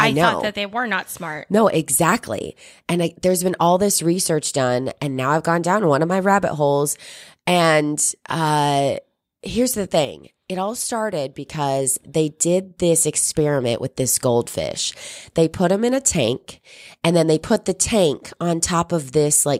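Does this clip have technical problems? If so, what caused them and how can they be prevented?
Yes. Right after "uh here's the", at 10.05 s, the speech and the background noise both drop abruptly by about 7 dB and stay lower until 11.46 s, when they jump back up. This is a sudden gain jump, likely caused by a digital gain setting being changed between one sample and the next with no ramp. Ramping any gain change over a few milliseconds prevents it.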